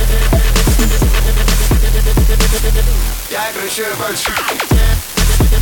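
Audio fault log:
Throughout: unreliable data bit. One marginal bit line flips in a random share of samples, each flip adding a spike of about -10 dBFS. This gives a constant crackling fizz that persists through pauses, seen as broadband vertical specks on a spectrogram and uniform-height spikes on the waveform.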